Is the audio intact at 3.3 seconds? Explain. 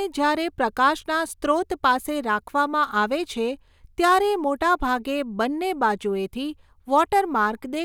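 Yes, the speech at 3.3 seconds is intact, with no dropout, click, distortion or other fault audible at that point.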